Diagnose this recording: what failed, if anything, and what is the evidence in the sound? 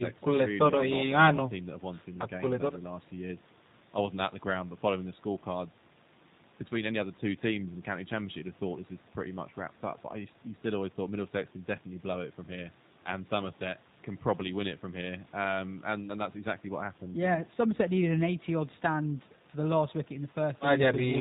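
Codec stage: the speech is band-limited to 4 kHz and sounds rough and synthetic throughout, which fits G.729 codec coding at 8 kbit/s rebuilding speech from a vocal-tract model and sparse pulses.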